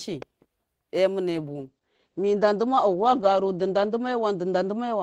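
From 1.31 s to the end, the speech turns rough, watery and muffled: a call bitrate drop from 32 to 11 kbps narrowed the bandwidth from 20 kHz to 8 kHz.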